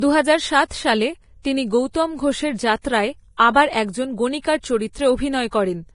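Speech throughout sounds hissy and grainy, with nothing above 10.6 kHz, likely heavy Vorbis compression near 29 kbps; its treble becomes noise, not dullness or warble.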